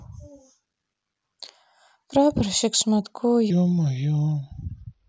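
From 3.50 s to the end at 5.08 s, a section at the wrong speed plays the speech at 0.8 times its rate, about four semitones lower and dragging, likely from a clock mismatch. A spectrogram shows harmonics stepping down at 3.50 s, and the waveform stretches.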